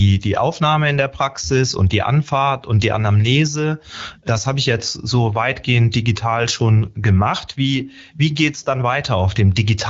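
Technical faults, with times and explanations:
No technical faults found; the speech passes through the AMR wideband (HD Voice) codec path as expected, with nothing above about 7.5 kHz.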